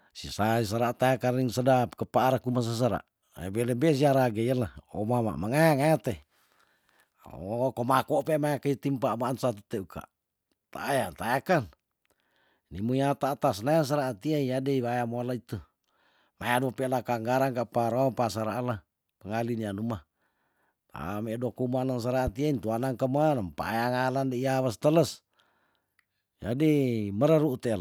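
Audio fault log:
22.27–22.30 s, loud pop. A single sharp pop sits on top of the speech, peaking around 10 dB above the level of the talking around it. It lasts only a few hundredths of a second, and the speech carries on underneath without a break. The likely cause is a sudden voltage step or spike, from a plug, switch, static discharge or driver glitch, entering the signal path. The circuits downstream shape that pulse into the brief, hard transient heard here.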